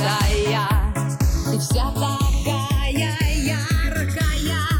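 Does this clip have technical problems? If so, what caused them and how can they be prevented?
Yes: channels drifting apart. The two channels came from devices on separate clocks, off by roughly 150 ppm, so the delay between them slides throughout, reaching roughly 0.7 ms. Summed to mono, the moving comb notches sound like slow flanging. Locking both devices to one shared clock prevents this.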